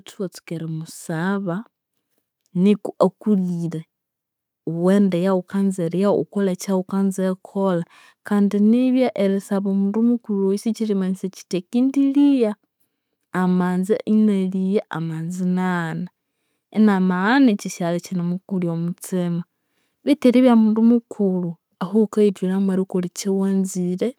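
Automatic gain rising, from 0.48 s to 5.9 s: the gain control judged the incoming speech too quiet and slowly turned itself up by about 6 dB, so the voice and the background noise swell together over those five seconds.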